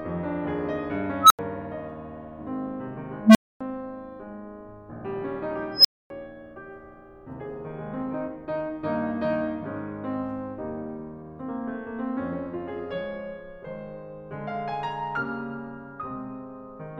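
A recursive filter goes unstable three times, its output growing until it clips and overflows. A beep swells over roughly 0.1 s, then the music cuts out: near 1.5 kHz at 1.20 s (85 ms gap), near 200 Hz at 3.25 s and near 5 kHz at 5.72 s (256 ms gaps).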